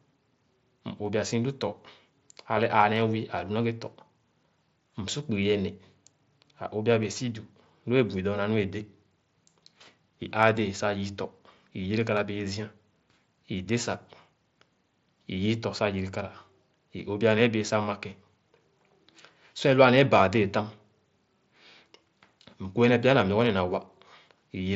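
Nothing stood out on listening to this speech, which comes through the Bluetooth mSBC headset path.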